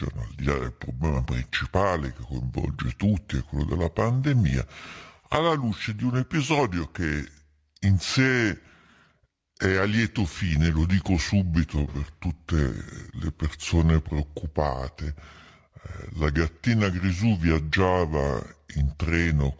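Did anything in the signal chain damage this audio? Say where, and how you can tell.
Yes. The damage is at the playback stage: a wrong sample rate, present for the whole clip. The speech runs at 0.726 times its proper speed and sits about 5.55 semitones low, so voices sound slow and heavy. The ratio points to audio captured at 22 kHz being clocked out at 16 kHz with no resampling. On a spectrogram, harmonics and formants are pushed down and the band ends near 8 kHz. On the waveform, syllables look stretched in time.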